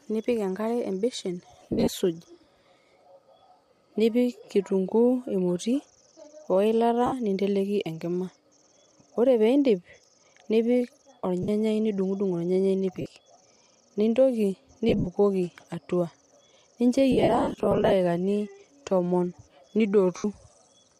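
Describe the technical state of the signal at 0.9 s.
At 0.9 s the speech is intact, with only the light, even coding texture of what is likely Bluetooth LC3 compression running normally and no fault present.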